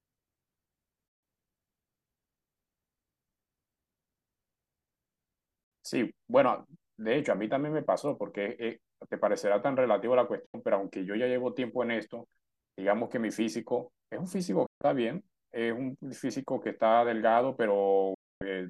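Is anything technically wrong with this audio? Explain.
Yes. The speech drops to silence five times: 1.08–1.23 s, 5.64–5.72 s, 10.46–10.54 s, 14.66–14.82 s and 18.14–18.42 s, each gap cut in with a 3 ms fade. This is digital broadcast dropout. The receiver lost frames and muted for 72 to 264 ms, which fits roughly 24 ms frames, so that sound is gone.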